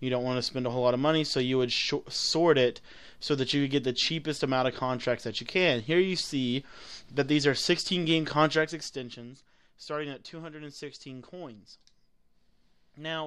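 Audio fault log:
8.46–9.29 s, zipper noise: the level falls by roughly 10 dB, but in coarse unsmoothed jumps, around thirty per second. Each jump leaves a tiny click, so a rapid ticking rides on the sound while the gain moves.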